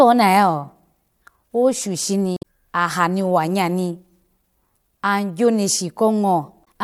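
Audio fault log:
2.34–2.43 s and 6.61–6.65 s, damaged data in a compressed stream: a short glitch cuts into the speech just before "ahani wa nya ni", then a quicker glitch near the end. Corrupted bytes made the decoder misread those frames, lose sync and hunt for the next frame header.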